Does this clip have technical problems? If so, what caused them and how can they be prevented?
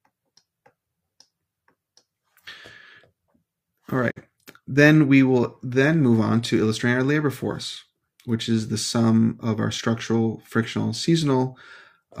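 Yes. Between 4.10 and 4.22 s the sound fades to silence over about 20 ms, stays muted briefly, and resumes with a short stretch of programme missing, about 43 ms of audio. This is a digital broadcast dropout: the receiver lost the signal or rejected a corrupted frame and muted until clean frames returned, which fits a single lost frame. A stronger, steadier reception path, with better antenna placement or error-correction margin, would prevent it.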